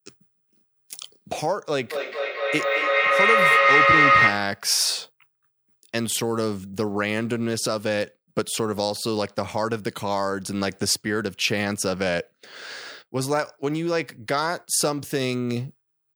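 Speech with feedback echo between two devices from 1.91 to 4.67 s: words return about every fifth of a second, building to about 8 dB above the speech.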